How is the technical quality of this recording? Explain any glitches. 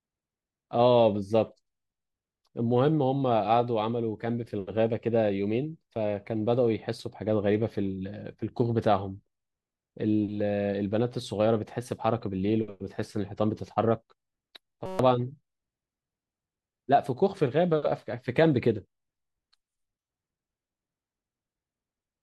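One glitch affects the recording. A system hang loop from 14.86 to 14.99 s: with the system frozen, the hardware replayed one 5.33 ms chunk 25 times, which fits a 256-sample buffer. The result is a steady buzz at about 188 Hz, and roughly 150 ms of speech is lost.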